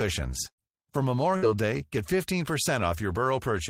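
At 0.49 to 0.63 s and again at 1.37 to 1.48 s, the speech stalls into a held, fading buzz or hiss, then jumps ahead with about 60 ms gone each time. This is burst packet loss: consecutive packets went missing, and the receiver stretched the last sound across the gap.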